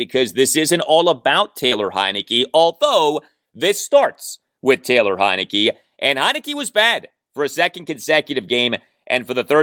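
At about 1.67 s there's a short concealed packet loss: roughly 40 ms never arrived, so the decoder patched it by extending the previous sound, leaving a brief smear.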